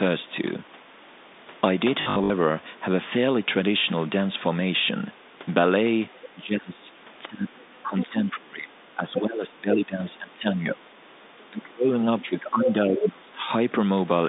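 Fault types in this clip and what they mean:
packet loss with last packet repeated: Packets went missing and the receiver replayed the previous one, so about 180 ms around 2.02 to 2.3 s stutters robotically.
speech suppressed in double talk: The echo canceller likely mistook overlapping talk for echo and turned the talker down by roughly 20 to 30 dB in stretches between 6.34 and 13.48 s.
other side's voice leaking through: Far-end sound likely escaped the echo canceller into the microphone, giving brief scraps near 7.6, 8.0 and 13.0 s, the last almost as loud as the talker.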